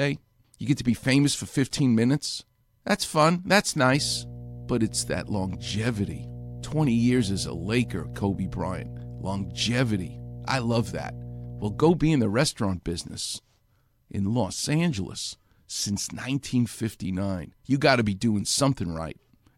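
Mains hum runs from 3.92 to 11.92 s: a steady 60 Hz tone with some low harmonics sits roughly 15 dB under the speech, where power-line current has leaked into the signal path, typically through a ground loop or a nearby transformer, then disappears.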